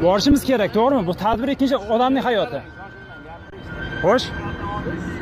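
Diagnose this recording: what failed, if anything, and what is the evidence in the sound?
The failure is at the driver or buffer stage: an underrun with held sample, occurring three times. Brief flat stalls appear at 0.31 s and 1.34 s, each about 5.8 ms, which fits a 256-sample buffer. A longer one runs from 3.50 to 3.52 s, about 23 ms, suggesting a 1024-sample block. The output ran dry and the converter froze on its last value, so the waveform holds steady at that value rather than dropping to silence. This is why there is no sharp click, which sets it apart from a zero-filled dropout. No audio is skipped, since playback resumes where it paused and the restart is soft.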